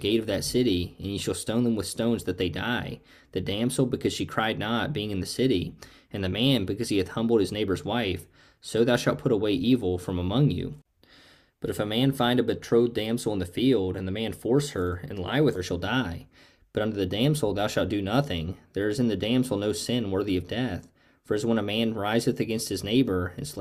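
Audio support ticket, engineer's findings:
Stream segment skipped, 15.55–15.60 s: likely one stream segment failed to load, player advanced to the next. Short blip, then audio jumps ahead; a second or more lost.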